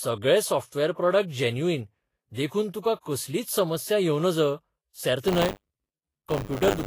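The whole clip has a hissy, grainy top, likely from Vorbis compression at a low bitrate, something like 32 kbps. From 5.27 s to the end there's buffer tearing: writer and reader cross every period, so a small slice of each buffer replays audio from about 40 ms earlier, giving a rough 100 Hz robotic buzz.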